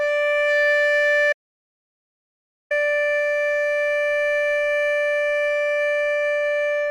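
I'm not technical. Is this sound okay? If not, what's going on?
No. There's an audio dropout to silence from 1.33 to 2.71 seconds. The music cuts off mid-flow and comes back about 1.4 seconds later, and the gap in between is total silence with no background hiss at all. That dead silence likely means the input was briefly lost, for example through a loose connection or an accidental mute, while the recording carried on writing nothing. Whatever played during that stretch is missing.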